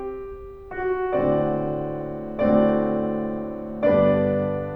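A short music excerpt with no technical faults to report: nothing in the signal stands out as broken or degraded at any point.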